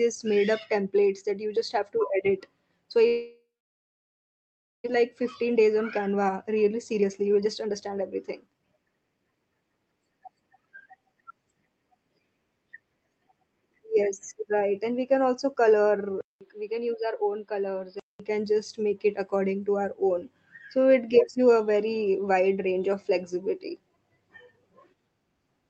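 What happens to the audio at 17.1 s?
From 16.21 to 18.20 s the sound goes dull and a bit quieter after a 200 ms gap, losing everything above 5.1 kHz under faint new background noise, likely the input switched to a poorer device.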